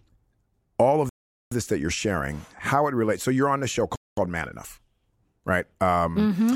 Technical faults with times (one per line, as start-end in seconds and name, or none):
1.09-1.51 Bluetooth stall
3.96-4.17 Bluetooth stall